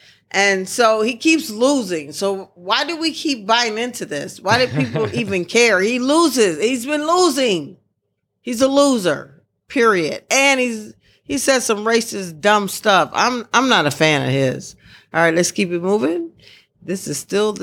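No technical faults can be heard anywhere in the recording, which carries the speech steadily with nothing breaking into the signal.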